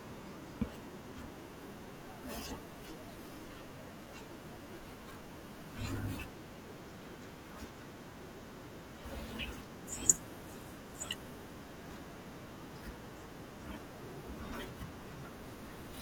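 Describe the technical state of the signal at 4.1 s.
At 4.1 s the signal carries a loose connector crackle, running from 4.02 to 4.10 s. A worn or dirty contact keeps making and breaking, chopping the signal and adding pops from any DC on the line. It sounds like a brief, irregular burst of scratchy crackle.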